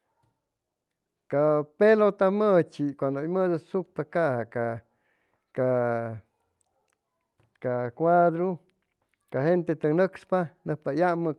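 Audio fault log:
No fault is logged for this audio.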